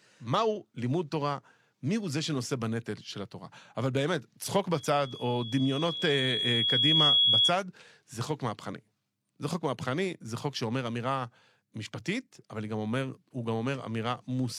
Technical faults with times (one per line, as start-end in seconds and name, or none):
4.74-7.55 loudspeaker feedback squeal